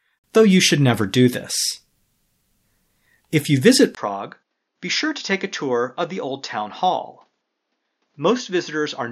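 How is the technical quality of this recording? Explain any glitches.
One fault affects the second half. From 3.95 s, right after "you visit", a 20 ms gap precedes duller speech cut off above 6.9 kHz, roughly 10 dB quieter, with new background noise around 50 dB down. This is likely the input switched to a poorer device, a narrower-band microphone with its own level and noise.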